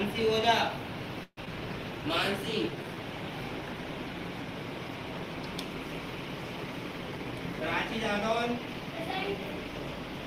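At 1.23 s the sound stops moving forward: the last moment carries on as a fading buzz for about 0.14 s, ending in roughly 50 ms of silence, before resuming exactly where it left off. This is a call audio freeze, likely from packets held up until the jitter buffer ran dry. On a spectrogram it shows as a smeared, decaying band, then a blank column.

At 1.45 s there is a skip ahead. About 70 ms of audio is dropped and the two sides are joined through a tiny 10 ms fill, so the sound jumps abruptly. The waveform shows a sudden discontinuity and the spectrogram a hard vertical seam.

From 2.40 to 3.01 s the jitter buffer slow-down repeats single pitch periods to rebuild its reserve, adding 67 ms. Playback runs at about 90% speed with unchanged pitch, so the sound is drawn out, sometimes with a faint warble. Harmonics appear stretched in time but stay level in frequency.

Two jitter buffer speed-ups trim short pitch-period slices to shed excess delay. 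From 7.12 to 7.88 s about 70 ms is removed at 108% speed, and from 9.38 to 9.94 s about 50 ms at 107%. Both sound slightly hurried at constant pitch, with spectrogram features compressed horizontally.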